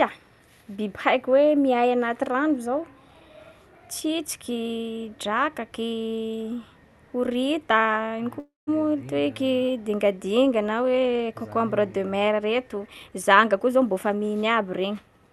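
At 8.39 s the speech stops moving forward for about 0.3 s, a call audio freeze, likely from delayed packets draining the jitter buffer. The last sound is stretched into a fading buzz that falls to silence for about 160 ms before the speech resumes where it left off. On a spectrogram this appears as smeared, featureless energy tapering into a blank band, and the waveform shows a decaying envelope followed by a flat stretch.

From 12.86 s to 14.19 s a jitter buffer speed-up plays the speech at about 122% speed. Short pitch-period pieces, roughly a third of a second in total, are removed to shrink the buffer, so the speech sounds hurried at the same pitch. Harmonic spacing on the spectrogram stays unchanged while syllables are visibly compressed in time.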